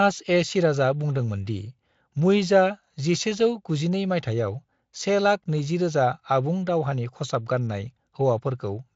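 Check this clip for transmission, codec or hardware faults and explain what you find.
No faults detected in this clip.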